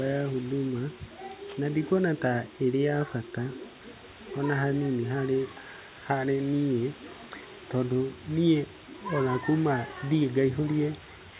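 Nothing goes wrong anywhere in this speech recording: the room noise sits well underneath, about 18 dB below the talker, and the sound stops at 4 kHz, which fits an ordinary G.711 mu-law call at 64 kbps.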